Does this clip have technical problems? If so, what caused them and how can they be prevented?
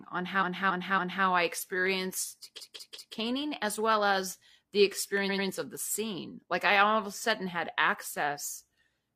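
Yes. Repeated frames stutter the speech at 0.38–1.21 s, 2.56–3.12 s and 5.25–5.44 s. Blocks of 279, 186 and 93 ms replay. Compressed frames were sent more than once. Check frame sequence numbers and drop duplicates before decoding.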